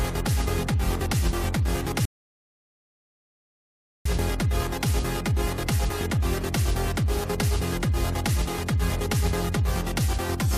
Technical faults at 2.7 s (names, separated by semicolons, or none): playback stall